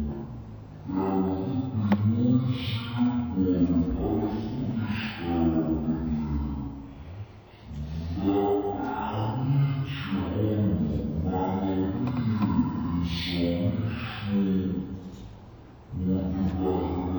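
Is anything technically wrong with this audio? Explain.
Yes. Throughout the clip the audio shows a stereo read as mono fault. The player has taken the interleaved left and right samples and treated them as consecutive samples of a single channel, so every stereo frame becomes two mono samples. The result runs at 0.5 times normal speed and sits 12 semitones, a full octave, below where it should be. A fainter mirrored copy of the sound also shows up in the upper half of the spectrum.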